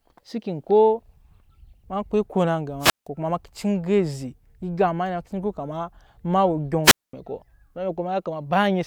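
At 2.80 s and again at 6.84 s, the speech suffers a wireless microphone squelch dropout. Each time, the RF signal from the analogue FM transmitter weakens until the receiver's squelch closes and cuts the output. A short swell of hiss comes first, then near silence lasting about 166 ms in the first event and about 223 ms in the second, before the speech resumes at 3.07 s and 7.13 s respectively.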